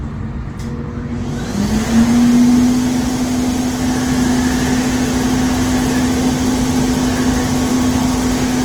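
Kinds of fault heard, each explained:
Opus compression: the audio was likely coded with Opus in its music (CELT) mode at a starved rate, fitting about 16 kbps. Bands short of bits are refilled by folding or noise, so tones turn plainly grainy and rough, while the full bandwidth to 20.1 kHz survives.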